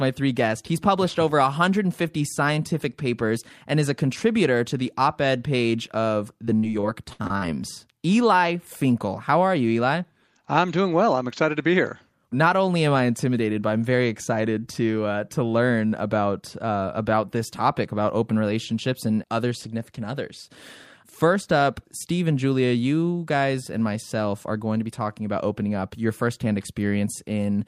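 From 6.45 to 7.43 s the speech turns choppy and robotic, with pieces of sound missing. This is repeated packet loss (robotic sound): six short holes open in close succession, the longest about 63 ms, and each is papered over by stretching the last received sound forward. Around 220 ms of the stretch, roughly a fifth, is this repeated filler rather than real audio, hence the mechanical quality.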